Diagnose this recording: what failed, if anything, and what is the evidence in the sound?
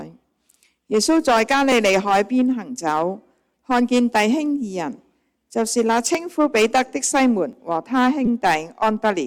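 Hard clipping at the converter or sample-format stage runs through the whole recording. The signal is driven about 7 dB past full scale, so a few percent of samples are flattened at the peaks. The flat tops add high harmonics, heard as crackle on louder moments.

A repeated buffer at the driver or buffer level occurs three times. New audio arrived late, and the device replayed its last block of about 5 ms. It replays once at 1.72 s and 6.15 s, giving brief clicks, and four extra times at 8.26 to 8.28 s, giving a short buzz.

An overlap between stream segments at the streaming or playback stage causes tiny skips at 3.54 s and 7.53 s. The segments are about 4 s long, and their time stamps overlap. The player trims sound that was never actually doubled, so the waveform jumps.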